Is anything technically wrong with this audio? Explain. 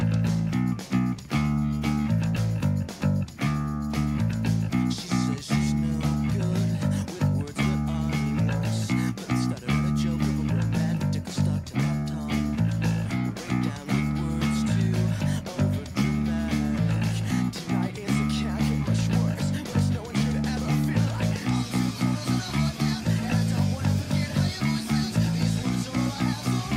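No, nothing technically wrong can be heard in this audio. There is nothing here that needs explaining from a technical point of view.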